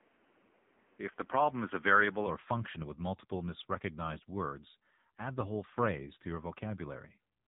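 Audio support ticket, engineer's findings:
AMR narrowband mobile codec, whole clip: buzzy, synthetic speech cut off above 3.8 kHz, heavy damage consistent with 6.7 kbps. Unlike plain low-pass filtering, the voice itself sounds rebuilt.

0.00 to 2.27 s: duller, boxier speech capped near 3.5 kHz with added noise about 35 dB down. Likely input switched to a poorer device. Changes tone without a gap or level jump, unlike a dropout.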